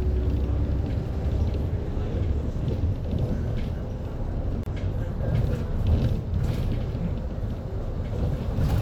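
At 4.63 s the sound drops out for about 29 ms, a brief hole with edges that are softened rather than perfectly clean, and then it picks up exactly where it left off. This is a gap at a join of encoded pieces: the audio was encoded in separate sections and spliced back together without trimming, so the encoder's start-up delay and the padding in its final frame remain as a short stretch of silence at the seam.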